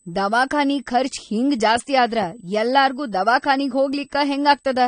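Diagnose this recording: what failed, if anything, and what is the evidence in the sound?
Three faults are audible. The first is USB whine, which sits at the analogue wiring stage: a steady tone at 8 kHz runs through the whole clip, roughly 40 dB below the speech. It comes from the bus's 125 microsecond microframe rhythm pulling current that leaks into the audio path through shared power or ground. On a spectrogram it is a thin, unbroken horizontal line at 8 kHz, present in pauses as well as under the speech.

The second is codec damage, most likely from AAC compression at a low bitrate, and it is plainly audible. The speech sounds dull and smeared, with a watery, fizzy texture on sibilants and sustained vowels. The encoder has discarded detail that its hearing model judged expendable, and the bandwidth stops at about 9.7 kHz. A spectrogram shows a hard ceiling with nothing above 9.7 kHz, plus patchy holes and blotches across the upper bands.

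The third is a single bit error spike at 3.93 s, a storage or digital-link fault. It is heard as one sharp tick unrelated to the speech. A single sample's value jumped by a power of two and immediately returned, which is what a flipped bit produces. On the waveform it is a lone one-sample needle, and on the spectrogram a hairline vertical stripe spanning all frequencies at that instant.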